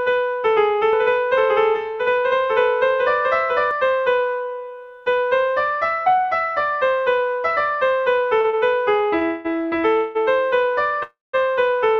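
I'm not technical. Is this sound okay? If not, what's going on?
No, it has three kinds of problem.

Doubled audio track: From 0.93 to 3.71 s, a second copy of the same sound plays alongside the first, about one second behind and somewhat quieter. This is likely because the sound was picked up twice, once through a slower route, or because an edit left two copies out of step. You hear an echo that repeats everything a full second late, then cuts off abruptly at 3.71 s.

Short stall from a late packet: Sound travels in small chunks, and three chunks arrived late, at 8.41, 8.50 and 9.19 s. Each time, the receiving end had nothing new to play, so it stretched the last bit of sound for about a fortieth of a second (27, 27 and 24 milliseconds) until the chunk turned up. Nothing is lost. Instead, a moment is held slightly too long, with a faint buzz or dip.

Call audio freeze: Three longer waits follow, at 9.25 to 9.47 s, 9.97 to 10.17 s and 11.03 to 11.35 s, probably because chunks were held up on the network. 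While waiting, the playback keeps the last sound going as a fading buzz, for about a fifth of a second in the first two cases and about a third in the last, which ends in about 0.17 s of silence. The sound then picks up where it stopped, so gaps are added but nothing is skipped.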